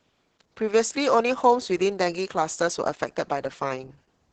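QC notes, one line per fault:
Throughout: Opus voice compression. Heavy damage, with the top end stopping near 8 kHz, and the speech sounds hoarse, muffled and slightly robotic as the linear-prediction coder quantises the excitation coarsely, which fits about 10 kbps. Unlike a plain low-pass, the voice texture itself is roughened.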